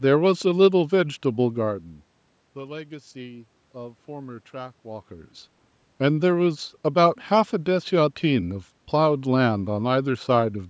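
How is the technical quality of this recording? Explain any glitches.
No glitches can be heard in this speech recording. Its sound reflects the call microphone processing with nothing above 8 kHz, room noise, and level shifts around 1.5 s and 5 s where the talker moved relative to the microphone.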